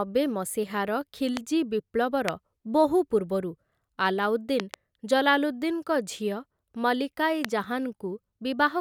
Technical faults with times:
1.37-1.39 loud pop
2.28-2.30 loud pop
4.60-4.76 loud pop
7.45-7.47 loud pop

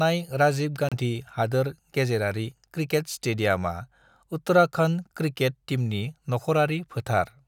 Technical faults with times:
0.89-0.95 Bluetooth stall

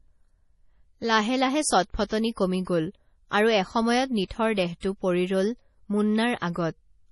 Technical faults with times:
0.00-7.12 MP3 compression

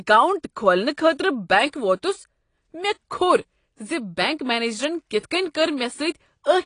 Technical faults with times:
0.00-6.66 AAC compression

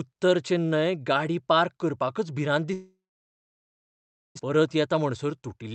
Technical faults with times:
2.73-4.41 long network dropout
4.49-5.71 jitter buffer speed-up

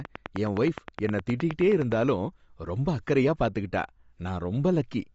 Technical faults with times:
0.00-5.14 Bluetooth LC3 compression
0.05-1.93 train of clicks

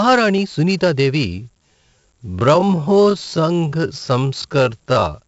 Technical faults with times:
0.00-5.28 4-bit ADPCM compression
1.26-5.28 time-stretched section

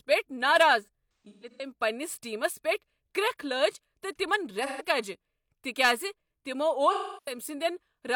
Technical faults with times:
0.82-1.71 AAC frame loss with concealment
4.66-4.84 AAC frame loss with concealment
6.92-7.37 AAC frame loss with concealment

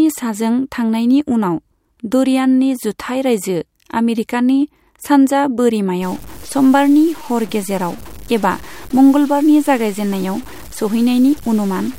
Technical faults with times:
6.02-11.98 low bit depth without dither

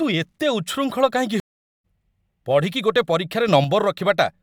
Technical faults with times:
1.40-1.84 stream reconnect
3.48-3.64 sudden gain jump

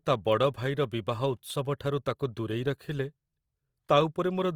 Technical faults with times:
0.00-4.56 Opus compression

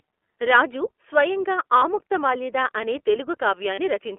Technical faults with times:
0.00-4.19 iLBC codec
1.78-1.82 lost iLBC frames
3.74-3.79 lost iLBC frames

